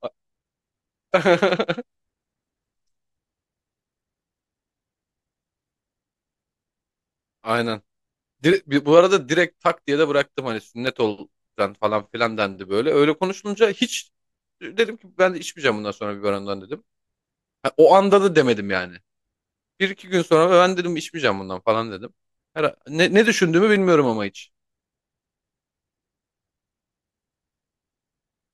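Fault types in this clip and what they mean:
Clock drift buffer slips: two devices likely running on separate clocks, roughly 150 ppm apart, let the buffer fill or drain until a few samples are dropped or repeated, giving a click about every 1.17 s through the speech from 0.33 s to 28.44 s.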